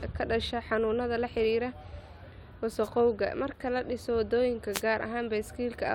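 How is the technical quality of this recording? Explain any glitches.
The recording has two brief wireless microphone noise hits. The first runs from 2.83 to 2.89 s. The second runs from 4.72 to 4.82 s. Each is a short burst of static lasting about 60 ms and about 100 ms. An analogue FM radio link is fading as reflected signals cancel the direct one. The receiver's own noise surges up. Each hit sounds like a quick swish of hiss.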